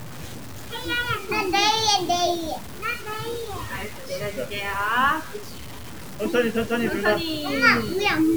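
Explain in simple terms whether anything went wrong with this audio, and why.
Something's off the whole way through: the audio has a grainy, gritty texture that shifts along with the sound itself, getting rougher in the quiet parts. That points to low bit depth without dither, likely from cutting it down to about 6 bits by simple truncation.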